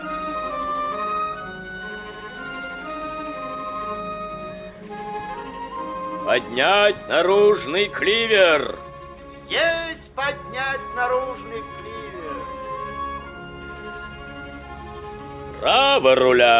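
Nothing in this recording stood out as a technical problem on listening.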